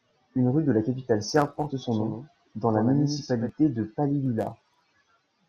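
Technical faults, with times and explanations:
1.91–3.49 s, doubled audio track: after "capitale serbe porte son", a dry, somewhat quieter copy of the speech trails about a tenth of a second behind, likely from a second, slower capture path.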